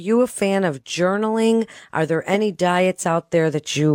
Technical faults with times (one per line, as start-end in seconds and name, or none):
none